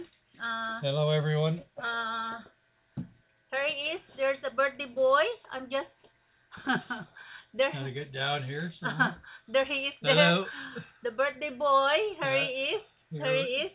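No technical faults can be heard in this audio.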